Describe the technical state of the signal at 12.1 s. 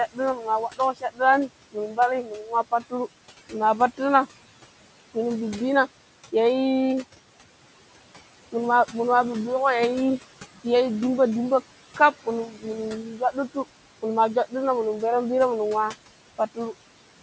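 At 12.1 s the speech is being cut by the noise suppressor. Between 11.96 and 12.65 s the suppressor misreads parts of the speech as background and attenuates them along with the noise, by about 14 dB at the deepest point. Roughly a fifth of a second within that span is affected, so the quieter speech components there sound swallowed and faint rather than cleanly articulated.

Underneath this, noise suppressor artifacts run through the whole recording. The suppressor pulls the steady room noise, which sits about 17 dB below the speech, down by about 18 dB in gaps, then lets it back up under active speech.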